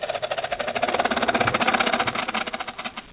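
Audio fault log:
throughout, doubled audio track: a dry second copy trails about 0.7 s behind, roughly 5 dB quieter, likely from a slower capture path or a misaligned edit.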